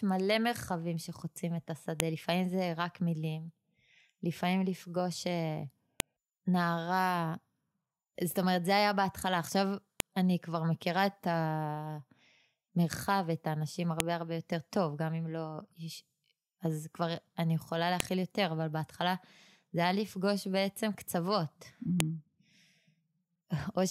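Sharp, loud clicks cut through the speech at 2.00, 6.00, 10.00, 14.00, 18.00 and 22.00 seconds, each a brief snap unrelated to the talking around it. The steady 4-second spacing identifies a file header played as audio: the clip was assembled from 4-second WAV pieces joined without stripping their headers. At each join, a few dozen header bytes are read as sample values, producing a burst of garbage.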